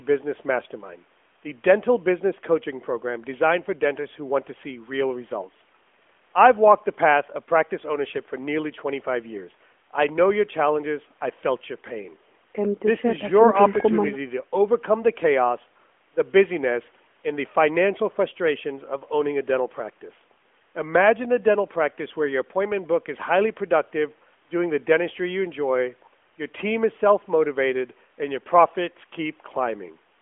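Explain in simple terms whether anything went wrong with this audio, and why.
Nothing went wrong here; no faults can be heard.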